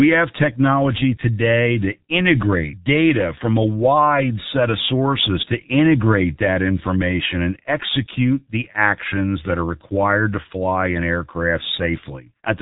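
Muffled, hoarse speech runs from start to finish, with consonants smeared together and no brightness at all, since nothing reaches above about 3.8 kHz. This is the G.723.1 codec, an early internet-telephony coder that works in 30 ms frames and refreshes its model of the voice only slowly, so rapid articulation blurs into a rough, buzzy texture. The damage is heavy, which fits its 6.3 kbit/s mode.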